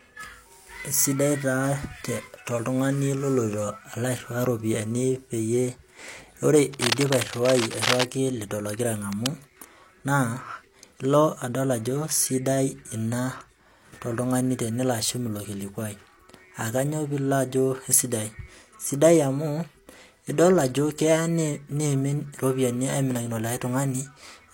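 Speech with bursts of scratchy, rustling cable scratch noise from 6.73 to 8.05 s, nearly as loud as the voice, before "lido logira", and more briefly after it at 9.12 to 9.29 s, likely a worn cable or connector being moved.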